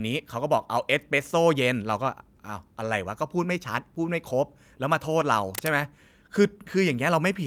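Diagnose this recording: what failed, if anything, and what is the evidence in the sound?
Block of digital silence at 3.95 s. An unfilled output buffer in the driver left an 8 ms hole, heard as a tick or dip.

Cable scratch noise from 5.55 to 5.70 s. Dense, uneven rustling sits just below the speech, likely a worn connector moving in the analogue wiring.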